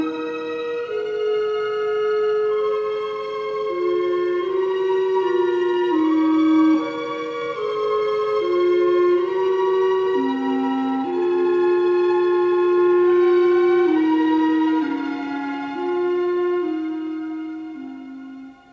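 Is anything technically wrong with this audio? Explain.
No, nothing technically wrong can be heard anywhere in this audio.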